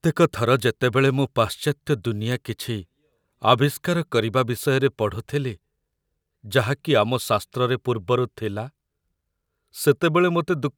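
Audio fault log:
0.60 s and 2.32 s, bit error spike: a single sharp tick each time, the second louder, peaking around -15 dBFS against about -21 dBFS. One sample jumps by a power of two and snaps back, so the click spreads across the spectrum, unrelated to the speech.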